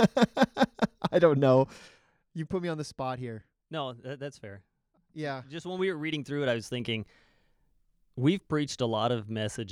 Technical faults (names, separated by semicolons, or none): zipper noise